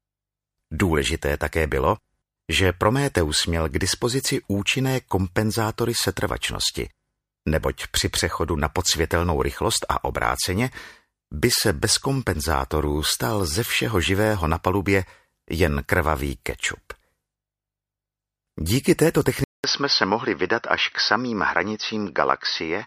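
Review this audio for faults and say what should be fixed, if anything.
Input switched to a poorer device at 19.44 s, lasting to the end at 22.87 s: after a 200 ms silence the sound turns dull, nothing above 6 kHz, with fresh background noise about 45 dB down and no real level change, likely a narrower-band microphone or headset call profile taking over. Fix the recording input to a single device and turn off automatic input switching before capturing.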